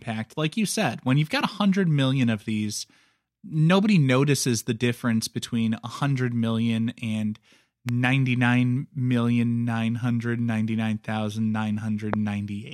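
Two loud pops cut through the speech, at 7.89 to 7.91 s and 12.14 to 12.16 s, the second one hotter. Each is a single sharp click, likely a voltage spike from a plug or switch.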